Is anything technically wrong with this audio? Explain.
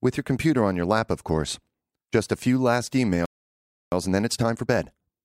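Yes, the speech has two related faults.

At 3.26 s, just after "a few last", there is a playback stall: the sound breaks off mid-flow and silence lasts about 0.66 s, until 3.92 s. The player has likely run out of buffered data or had its audio thread blocked. On a waveform this shows as an abrupt drop to a flat line; on a spectrogram, as a clean vertical gap with energy cut off sharply on both sides.

From 3.92 s to the end comes time-compressed catch-up. The player works off its backlog by removing small slices of audio and cross-fading the joins, so the speech runs about 1.25 times faster while keeping its normal pitch. It sounds hurried. A spectrogram shows syllables and pauses packed closer together, harmonics staying at the same heights, and small discontinuities at the splice points.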